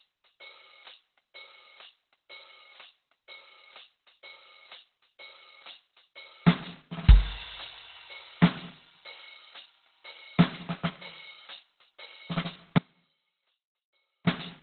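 From the start, the music sounds muffled, hoarse and grainy, with nothing above 4.2 kHz. This points to heavy Opus compression, likely in its narrowband speech mode. The low rate fits roughly 12 kbps. The encoder drops the upper band and roughens the tones to save bits.

At 12.78 s the music cuts out abruptly. It returns at 14.27 s, after about 1.48 s. There is an audio dropout to a faint residue. A faint sound stays, roughly 25 dB below the music. The signal was likely lost, but the path after the break stayed live.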